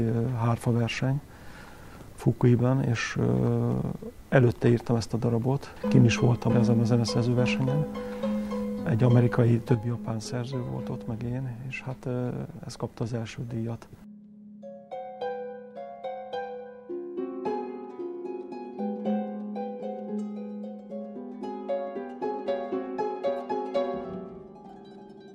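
At 9.75 s the level drops abruptly by about 6 dB and stays down to the end, likely one channel dropping out before the mono sum.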